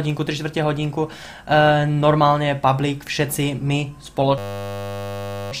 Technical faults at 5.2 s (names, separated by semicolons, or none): system hang loop